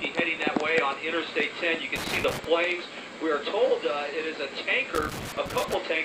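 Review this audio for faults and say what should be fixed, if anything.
Loose connector crackle appears from 1.96 to 2.45 s and again from 4.95 to 5.75 s: irregular scratchy bursts where a worn or dirty contact intermittently breaks the signal path, chopping the audio. Clean or replace the affected connectors and secure the cables against movement.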